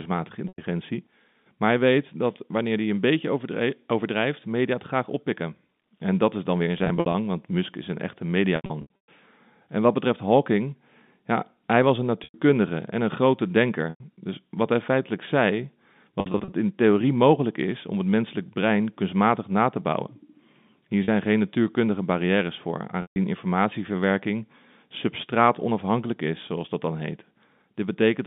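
Packet loss with pitch repetition interrupts the speech at 0.48–0.58, 6.78–7.14, 8.56–9.08, 12.24–12.34, 13.90–14.00, 16.20–16.52, 21.04–21.08 and 23.02–23.16 s. The receiver covers each lost stretch by looping the last pitch period, which fits 20 ms packets. Short gaps sound like a briefly held, buzzy tone. The 8.56 s stretch is the worst, with about 320 ms lost in runs up to 120 ms. There the held tone fades before the speech returns.

On a spectrogram, the harmonics run flat and unchanging through each gap. The waveform shows identical repeated cycles that taper off, all inside the telephone band, which tops out near 3.7 kHz.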